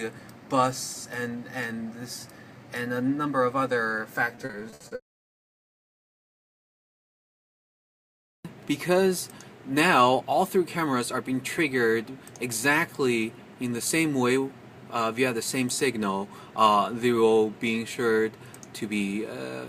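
From 4.35 to 5.80 s there is repeated packet loss with a robotic sound. Thirteen gaps occur in quick succession. Each is patched by extending the preceding sound. About 330 ms is filled this way, and 200 ms is simply missing. The longest gap is 60 ms. The stretch turns choppy.

From 10.14 to 11.01 s comes a jitter buffer speed-up. Too much audio had built up in the buffer. The receiver trimmed short pitch-period pieces, about 70 ms in total. Playback runs at 107% speed with unchanged pitch, so it sounds hurried.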